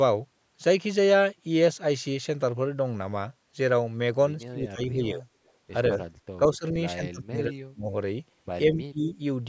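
A speech recording from a call, band-limited by the call's microphone processing so that nothing appears above 8 kHz, has repeated stretches of speech suppressed in double talk at 4.45–5.25 s, 5.94–6.00 s, 6.38–6.66 s, 6.95–7.89 s and 8.69–9.20 s. The likely cause is the echo canceller failing to tell the local talker from loudspeaker echo while both sides spoke, so it turned everything down. The deepest cuts are roughly 35 dB near 7 s and 25 dB at 4.5 s, while the 5.9 s dip is only a few dB. On a waveform the envelope pinches inward at those times, and a spectrogram shows the harmonics fading or breaking into fragments. A brief echo leak at 5.47–5.51 s, likely from residual loudspeaker pickup passing the canceller, adds a faint copy of the speech delayed by 169 ms and sitting about 40 dB down. It would appear as a weak trace trailing the main energy.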